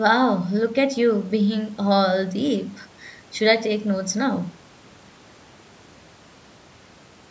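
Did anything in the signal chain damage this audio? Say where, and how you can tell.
No, nothing in the chain damaged this speech: it carries the normal marks of call microphone processing, with the lowest bass trimmed by its high-pass filter and nothing above 8 kHz.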